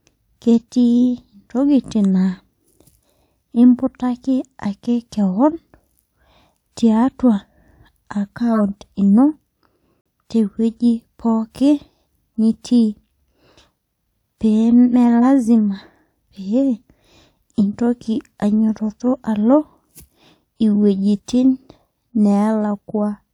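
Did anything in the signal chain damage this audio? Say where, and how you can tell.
Yes. At 8.53 to 8.59 s a brief chirpy burst jumps out at around -10 dBFS, and at 15.21 to 15.25 s a shorter, quieter blip sits near -15 dBFS. This is a corrupt frame decoded: damaged codec bits were played anyway, scattering energy across wrong frequencies for roughly one frame at 8.53 s and four frames at 15.21 s.

At 10.01 s the sound cuts abruptly to silence for about 70 ms, then resumes with no shift in timing. That is a corrupt frame muted: the decoder rejected damaged compressed data, and the player filled the gap with silence, which fits two lost frames.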